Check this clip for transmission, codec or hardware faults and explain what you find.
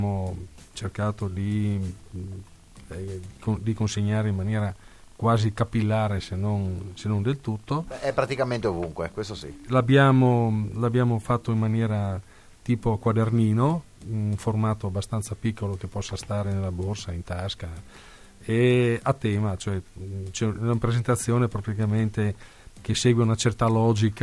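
Nothing audible points to a transmission, codec or hardware fault anywhere in the clip.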